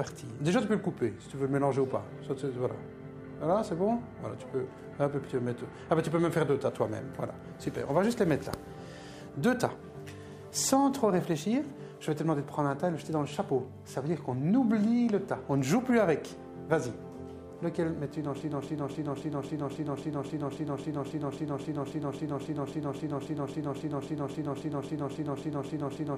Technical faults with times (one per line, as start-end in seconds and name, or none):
18.41-26.18 broken-record loop